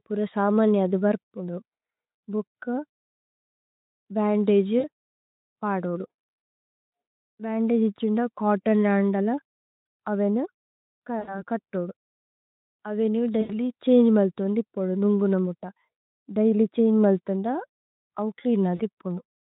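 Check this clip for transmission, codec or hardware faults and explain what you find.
Four short dropouts in this speech clip show VoIP packet loss concealed by the speech codec, at 4.79–4.88, 11.19–11.42, 13.41–13.53 and 18.76–18.81 s. The first and last gaps suggest about 40 ms lost, and the middle two about 80 ms each. The decoder repeats its last pitch and filter with falling gain, so the voice smears into a fading buzzy tone or coloured noise. On a spectrogram this looks like flat, repeated harmonic stripes that dim. On the waveform it looks like a decaying, overly regular stretch. The Speex coding itself adds at most faint colouring.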